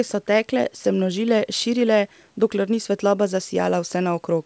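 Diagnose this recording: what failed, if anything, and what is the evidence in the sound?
Nothing stood out on listening to this speech recording, so there is no failure to diagnose.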